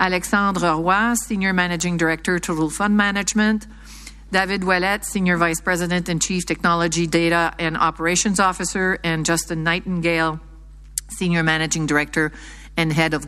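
A steady mains hum runs through the whole clip. It sits at 50 Hz, with some low harmonics above it. It sits about 20 dB below the sound itself. A ground loop or nearby transformer is feeding the power line into the signal.

From 0.51 s to 12.13 s, word clock ticks appear. There are about ten of them, roughly every 1.5 s. They are sharp and uneven in strength. The receiving device runs on its own clock, drifting by around 15 parts per million. Each slip drops or repeats a single sample.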